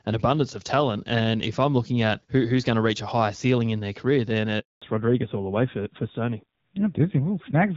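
Right after "in their career then", at 4.60 s, there's a handover gap: the call hops networks, no frames arrive, and the voice cuts to silence for 220 ms until 4.82 s. From 4.82 s to the end it's a fallback to narrowband. Everything above 4 kHz is gone, and the speech turns duller and grittier, which points to an older, low-rate narrowband codec taking over.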